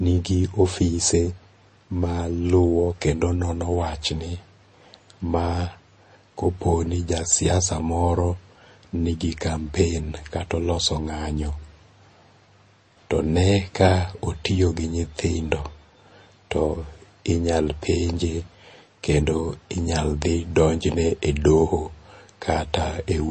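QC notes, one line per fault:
throughout, MP3 compression: nothing is heard above 8.3 kHz, and the speech has a plainly audible watery, swirling texture with chirpy s sounds. That is likely an MP3 encoder short of bits, which fits about 32 kbps. A simple low-pass filter would dull the treble without the swirl.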